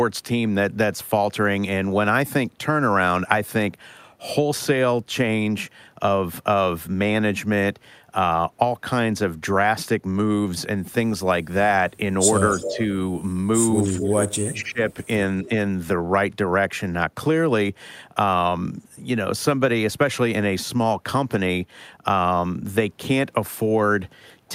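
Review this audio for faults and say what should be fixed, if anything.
A delayed, slightly weaker copy of the speech trails the talker by about 0.27 s at 12.5–12.77 s and 13.83–14.07 s, and faintly at 15.44–15.49 s. This is echo leak, likely from a loudspeaker whose echo canceller let its microphone pickup pass back. Better acoustic isolation or a headset would prevent it.

The talker's level dips noticeably at 12.53–12.89 s, slightly at 13.84–13.98 s, and deeply, almost cutting out, at 14.32–14.82 s. This is speech suppressed in double talk, likely the canceller turning everything down while both sides spoke. A canceller with better double-talk detection would prevent it.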